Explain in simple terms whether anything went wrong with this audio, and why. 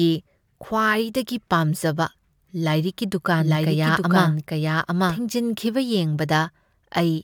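A doubled audio track runs from 3.39 to 5.19 seconds. During that stretch the speech is heard twice at once: a second copy trails about a second behind, roughly as loud as the original, so the two overlap and blur together. The copy has no echo tail or room sound, and it switches on and off abruptly. The likely cause is the same audio being captured a second time through a slower path, or an edit leaving two copies out of step.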